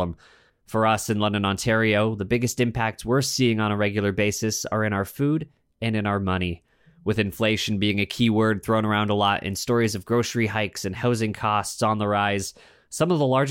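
Nothing in this speech recording stands out as a technical fault, so there's nothing to flag along its timeline.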